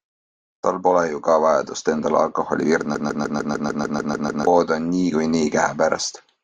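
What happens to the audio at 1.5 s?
Nothing goes wrong at 1.5 s; the speech runs through that point intact, with no dropout, click or other fault to be heard.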